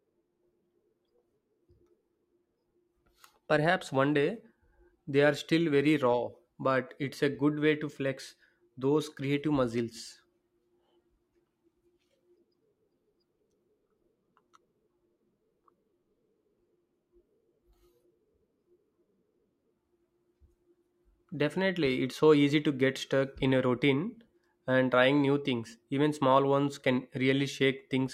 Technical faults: underrun with held sample

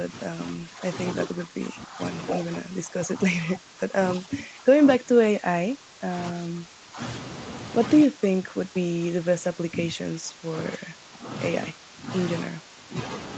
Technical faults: speech suppressed in double talk

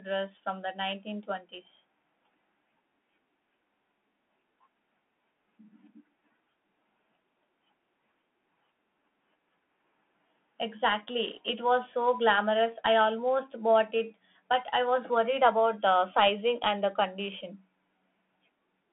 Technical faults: Bluetooth CVSD headset codec

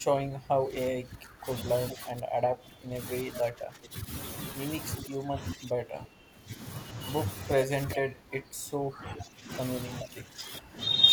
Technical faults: speech suppressed in double talk; echo leak

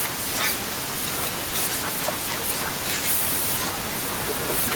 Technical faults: sound dropped by the voice detector

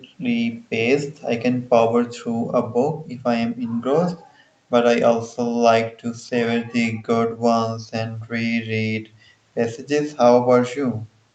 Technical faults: none

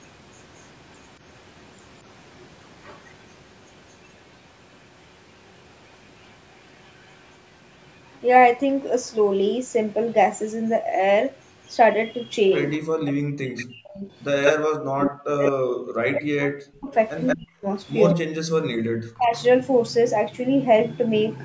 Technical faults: echo leak; speech suppressed in double talk

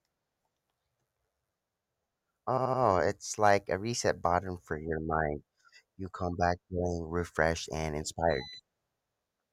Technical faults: repeated frames

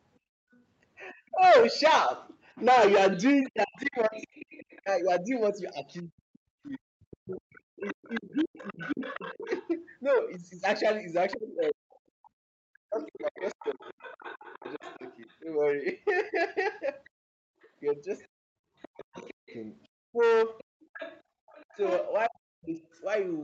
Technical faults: background gated by the echo canceller; other side's voice leaking through; speech suppressed in double talk

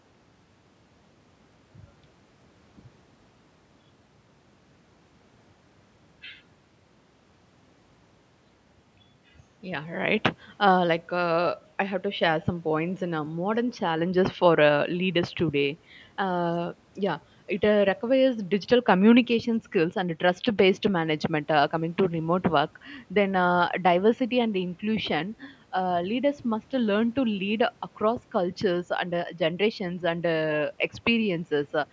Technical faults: none

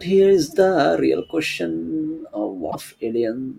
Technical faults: damaged data in a compressed stream

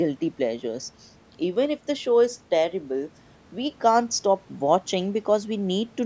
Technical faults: none

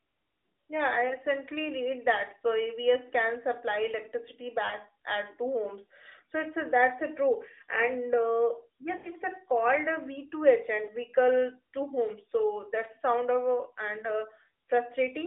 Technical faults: lost AMR speech frames

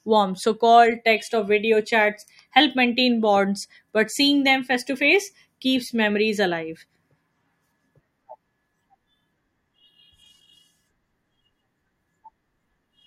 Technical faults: none

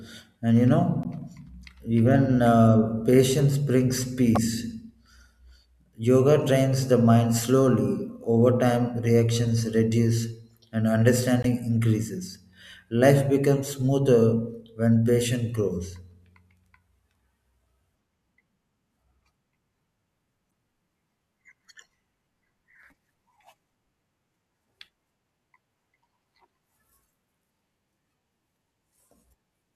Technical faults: damaged data in a compressed stream

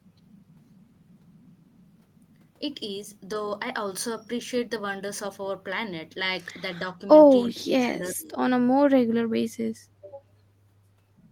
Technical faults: speech suppressed in double talk

